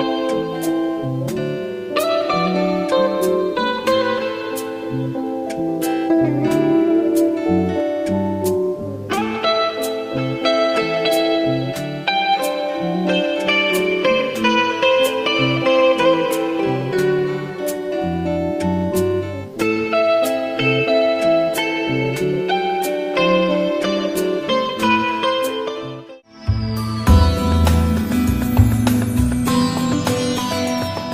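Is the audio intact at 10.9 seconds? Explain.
Yes, the audio is intact at 10.9 seconds, with no fault audible at that moment.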